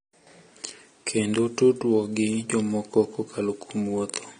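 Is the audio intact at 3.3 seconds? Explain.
No, the speech at 3.3 seconds, as throughout, likely suffers transcoding between lossy codecs, an MP3-style encode then low-rate AAC, stacking the artefacts of both codecs under a dulled top end.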